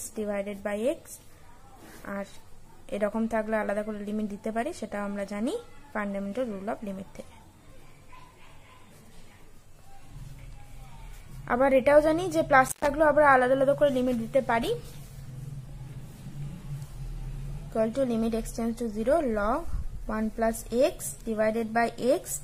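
At 12.67 s the sound drops out abruptly, with a brief crackle at either edge and only faint hiss underneath, returning by 12.87 s. This is an intermittent contact: a loose cable or plug briefly lost connection, leaving the line open for about 117 ms.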